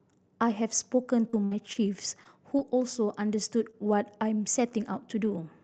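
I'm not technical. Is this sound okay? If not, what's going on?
No. There are three kinds of glitches in this speech clip.

From 1.03 to 2.63 s you hear repeated packet loss (robotic sound). Small chunks of the call went missing six times in that stretch, the longest about 60 ms. Each time, the receiving end guessed by stretching out the last bit of sound. Altogether roughly a fifth of a second was filled in this way. So this part sounds choppy, with bits of the speech missing.

At 3.71 s and again at 4.69 s there is a short concealed packet loss. Each time, about 20 ms of audio never arrived in time. The receiver covered the hole by carrying on the sound just before it, then slid back into the real audio. Each one is a tiny smear or wobble. A short sound right there could drop out.

At 4.71 s and at 5.25 s there is a lost packet rebuilt from error correction. A 20 ms piece went missing, but the next piece carried a rough backup copy of it. 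The receiver played that copy, so there is no gap. Those two moments just sound rougher and noisier for an instant.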